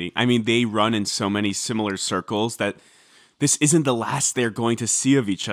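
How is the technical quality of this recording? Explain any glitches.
No technical glitches can be heard in this recording.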